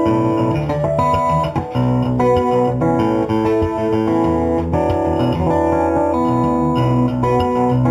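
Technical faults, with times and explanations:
Throughout, imaging from linear upsampling: the top end sounds dulled, with a faint metallic shimmer from a mirrored copy of the spectrum at 4 to 8 kHz, roughly 35 dB down. Straight-line interpolation filters weakly, consistent with raising an 8 kHz rate to 48 kHz.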